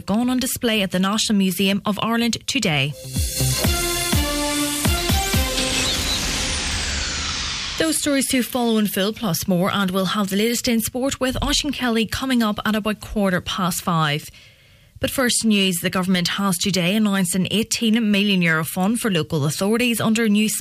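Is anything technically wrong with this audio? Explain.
No, nothing in this audio stood out as a technical problem on listening.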